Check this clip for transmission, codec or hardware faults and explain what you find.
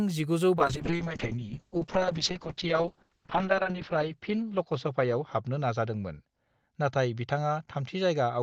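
There's one fault here, a call bitrate drop starting around 0.57 s and lasting to the end. The bandwidth estimate fell, so the encoder had to squeeze the speech into far fewer bits. The quality slide fits a drop from roughly 32 kbps to about 6 kbps, bottoming out for close to 3 s. The coarser coding makes the speech rough and a bit watery, and the top end is lopped off at 8 kHz instead of reaching 20 kHz, so everything turns muffled.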